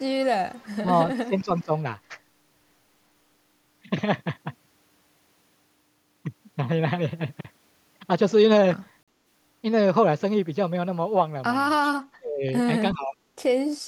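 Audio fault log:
0.50–0.76 s, echo leak: the far end's echo canceller likely let loudspeaker pickup through, so a faint copy of the speech, about 30 dB down, trails it by 369 ms.
0.81–0.89 s and 1.27–1.71 s, speech suppressed in double talk: an echo canceller, likely confused by both sides talking at once, ducked the talker, who dips by about 15 dB.
9.03–9.08 s, Bluetooth dropout: packets likely arrived too late for the headphones, leaving a 46 ms silent hole, which fits two lost packets, before speech resumes.
11.84–11.90 s, echo leak: residual loudspeaker pickup was likely not cancelled, so a brief echo about 25 dB below the speech returns 369 ms late.
11.91–12.44 s and 12.93–13.17 s, speech suppressed in double talk: the canceller likely could not separate the talker from the echo during overlap, cutting the speech by up to about 35 dB, then about 20 dB.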